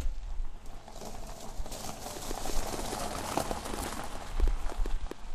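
Likely interference or a faulty connection injects pulses from 2.17 to 5.12 s, a train of clicks: about fifteen irregular, loud pops, roughly 5 per second.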